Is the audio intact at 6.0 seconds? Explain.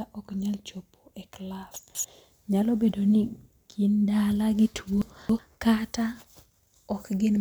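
Yes, the audio is intact at 6.0 seconds, with no fault audible at that point.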